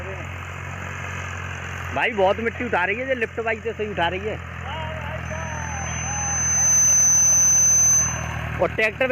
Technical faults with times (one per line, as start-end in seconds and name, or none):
2.02-2.83 hard clipping
3.23 hard clipping
4.03-4.05 hard clipping
5.25-8.43 loudspeaker feedback squeal
8.62-9.12 hard clipping